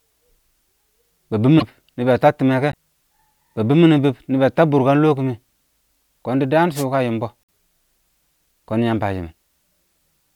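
At 1.58 to 1.63 s and again at 2.71 to 2.76 s, the speech jumps forward and the next few tens of milliseconds come out garbled. The likely cause is a broken MP3 bit reservoir: after frames of roughly 26.1 ms went missing, the following frames looked back for borrowed data and decoded bytes that belonged to a different frame. The same skip and garbling returns at 7.43 to 7.50 s.

Between these, from 6.74 to 6.84 s, a wireless microphone noise hit appears as a short swish of static lasting about a tenth of a second. The analogue FM radio link faded as reflected signals cancelled at the receiver, so receiver noise rose over the speech for that moment.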